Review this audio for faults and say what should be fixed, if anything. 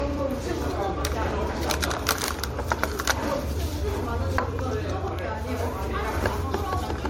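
Generation loss runs throughout: swirly, hollow smearing, soft attacks and nothing above 16.6 kHz, likely from a few MP3 passes at what sounds like 64 kbit/s. Keep a lossless master and encode to a lossy format only once, at the end.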